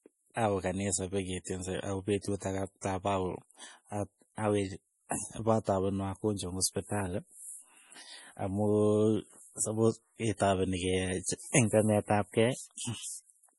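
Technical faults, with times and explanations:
Throughout, MP3 compression, heavy: the speech has nothing above about 11.5 kHz and sounds watery and swirly, with metallic chirps on s sounds and smeared attacks. This is likely an MP3 encoder starved of bits, which fits a low rate around 32 kbps. It cuts the treble at a fixed frequency and drops weak frequency lines that then flicker on and off between frames, so sibilants chirp and consonant onsets blur.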